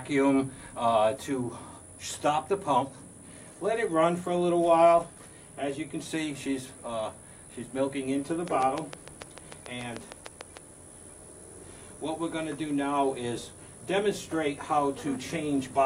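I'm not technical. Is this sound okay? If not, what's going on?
No. From 8.48 to 10.58 s there's a train of clicks: about fifteen near-identical, evenly spaced ticks, roughly 6.7 per second, likely interference rather than random crackle.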